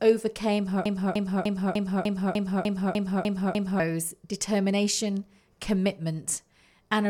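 From 0.86 to 3.80 s the speech sticks in a broken-record loop: a 0.3 s fragment repeats ten times, likely from a stalled stream, drawing identical tiled blocks on a spectrogram.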